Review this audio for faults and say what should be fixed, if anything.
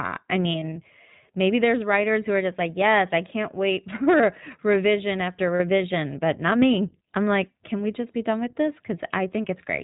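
The whole recording passed through the iLBC codec, which fits its 20 ms, 15.2 kbps mode. Each frame's excitation is coded independently and everything above 4 kHz is removed, so the speech is narrowband, clear but plainly rough and synthetic in texture throughout. Sending the audio over a wideband codec would prevent this.

Lost iLBC frames occur between 0.52 and 0.77 s. The dropouts are brief and scattered across about 240 ms, totalling 100 ms, which fits about five lost 20 ms frames. For each one the decoder repeated the last pitch cycle blended with noise, giving short buzzy, held-vowel flickers before the voice recovers. A second loss of 40 ms follows at 5.56 to 5.61 s, between "for revision after" and "but not me I'm", heard as a brief breathy smear. Adding a jitter buffer with forward error correction or packet redundancy on the network link would prevent these gaps.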